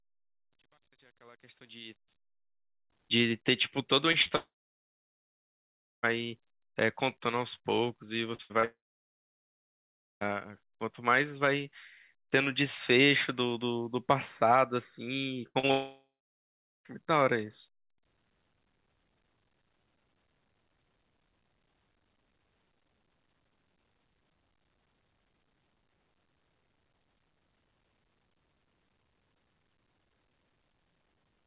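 The clip opens with a smooth fade-in over its first 2.9 seconds, but the quiet part carries truncation distortion on a fade from 0.0 to 2.90 s, worst up to 2.18 s. The faint sound turns gritty, which points to a 10-bit gain stage without dither. Unlike codec noise, the grit rises as the level falls.

Repeated packet loss (robotic sound) follows at 4.12 to 4.32 s, 8.35 to 8.65 s and 15.47 to 15.71 s. Each stretch has three short holes, the longest 39, 72 and 81 ms, patched by continuing the last sound. The result is a choppy stutter in which pieces are missing but the sound keeps going.

Each burst runs straight into a long network dropout, at 4.36 to 6.05 s, 8.65 to 10.23 s and 15.71 to 16.87 s. Here the patched sound buzzes and fades to silence for about 1.5, 1.4 and 0.75 s. The sound then resumes further on with that part gone. Unlike the bursts, this is one sustained gap, most likely from the network delivering nothing for over a second. 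Through all of this the call codec's band limit is audible, with nothing above 4 kHz.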